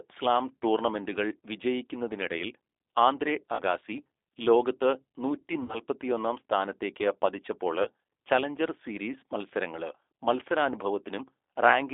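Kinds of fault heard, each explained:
G.729 codec: The whole clip of speech has that rough, slightly synthetic low-bitrate VoIP quality, which fits G.729 running at around 8 kbit/s. The codec doesn't send the waveform itself, just a vocal tract filter, a pitch guess and a few pulses per frame, and the decoder rebuilds speech from those. The damage is plainly audible here, and the sound sits in a narrow line band of roughly 300 Hz to 3.6 kHz, so it's dull and boxy.
VoIP packet loss concealed by the speech codec: There are three dropouts where the decoder had nothing and made up sound by extending its last pitch and filter while fading the level. They're at 3.55 to 3.63 s right after "സ്ലാം ടൂർണമെന്റുകൾ വിജയിക്കുന്നതിനിടയിൽ ആന്ദ്രെ" with about 40 ms missing, at 5.63 to 5.80 s after "ലോകത്ത് നൂറ്റി" with about 60 ms missing, and at 7.83 to 7.87 s between "സ്ഥാനത്തേക്ക് പതിച്ചപ്പോള്" and "ചലഞ്ചർ സീരീസ് മത്സരങ്ങള്" with about 20 ms missing. 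Each one comes across as a short stretched sound that fades, and the speech stays weak for a moment afterwards.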